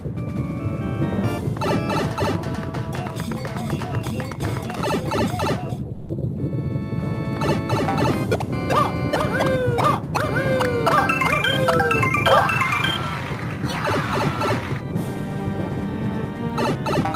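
The audio has one fault, sound dropped by the voice detector. From 5.93 to 6.09 s, about 160 ms of sound gives way to steady noise or near silence, then returns. The likely cause is an Opus-style DTX detector mistaking the sound for background.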